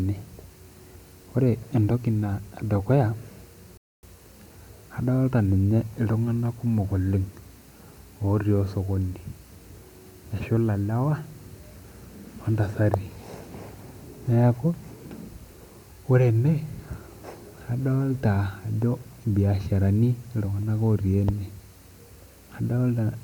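At 3.77 s the player drains its store of downloaded audio and has to wait for more data to arrive, a rebuffering stall. The speech stops dead and the line goes silent for about 0.26 s, until 4.03 s, when playback picks up at exactly the point where it broke off. No speech is skipped or repeated; the stall simply inserts a gap of roughly a quarter of a second.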